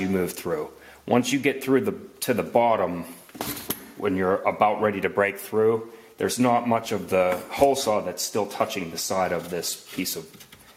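No technical faults can be heard anywhere in the clip. Nothing in the audio drops out, breaks up or goes wrong at any point.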